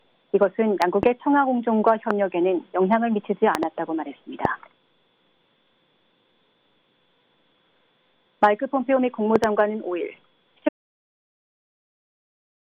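Loud pops break in five times. A double pop lands between 0.82 and 1.05 s. A single pop comes at 2.11 s. Another double follows between 3.55 and 3.65 s, then a single at 4.45 s, and a last double between 9.36 and 9.46 s. Each is a sharp thump about 15 dB above the sound, which keeps running underneath. The likely cause is a voltage spike from a loose plug, a switch or static.

At 10.69 s an audio dropout to silence begins and lasts to the end. The sound cuts off mid-flow. What follows is silence, with no room tone or hiss. Whatever came after that point is lost. The likely cause is a lost input, from a disconnected device, a failed link or a stray mute, while the recorder kept writing silence.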